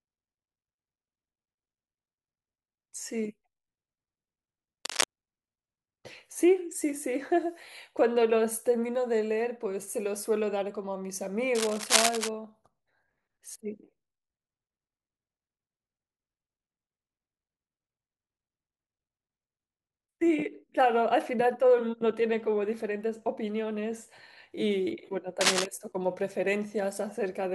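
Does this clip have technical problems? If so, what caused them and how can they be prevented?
Yes. Cable scratch noise occurs at 4.85 to 5.04 s, 11.55 to 12.29 s and 25.41 to 25.66 s. These are ragged rustling bursts about as loud as the speech, likely from a worn cable or connector whose contact resistance flickered as it moved. Unlike isolated clicks, each burst is dense and uneven. Replacing worn leads and securing connectors against movement prevents it.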